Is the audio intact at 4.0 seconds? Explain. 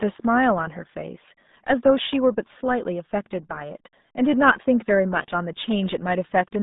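No. The RealAudio 14.4 codec damage is present at 4.0 seconds, as it is across the whole clip. This dial-up-era speech coder packs the signal into a very low bitrate, which fits about 8 kbit/s. It keeps only a narrow line band of roughly 150 Hz to 3.7 kHz and leaves nothing above 3.8 kHz. The heavy coding leaves the speech at that moment muffled, thin and gargly.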